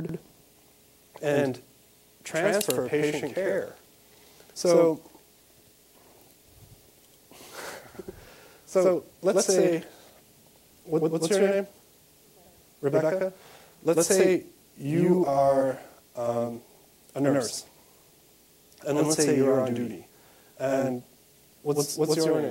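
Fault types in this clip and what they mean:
Channel delay (doubling): every sound arrives twice, with a second copy of equal strength about 93 ms behind, heard as a slap echo throughout. One channel runs late, which fits a 4096-sample buffer, and the two are summed to mono.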